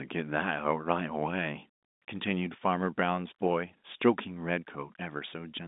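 No technical faults can be heard in this speech.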